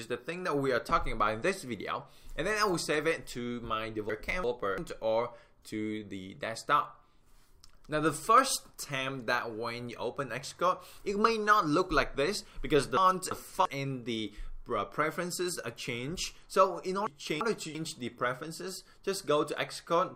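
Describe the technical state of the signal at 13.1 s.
At 13.1 s the signal is inside a chunks-out-of-order fault spanning 12.97 to 13.65 s: two 341 ms chunks play swapped, one arriving a chunk late, giving a jumbled moment. The waveform breaks abruptly at three joins.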